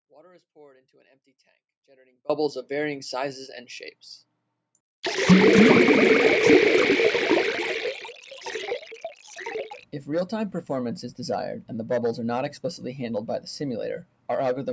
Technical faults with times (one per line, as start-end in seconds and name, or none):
0.00-14.73 noise suppressor applied to music or sounds
0.00-2.29 audio dropout to a faint residue
8.01-8.46 sound cut by the noise suppressor
8.79-9.37 sound cut by the noise suppressor
9.70-9.85 sound cut by the noise suppressor